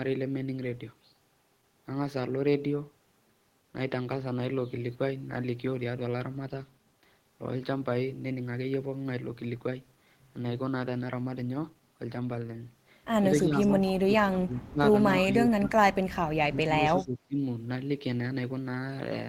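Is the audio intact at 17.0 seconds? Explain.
No. From 16.49 to 17.37 s the speech dips by up to about 25 dB for roughly 0.7 s, likely speech suppressed in double talk as an echo canceller ducks both sides, unlike a dropout's clean silence. From 16.98 to 17.04 s an echo leak adds a faint copy about 25 dB down, delayed 263 ms, a distinct repeat rather than room reverb.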